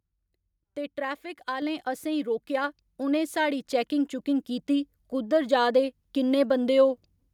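Speech with a microphone volume stepped up at 1.62 s: the input gain jumps by about 4 dB in one step, lifting voice and background together.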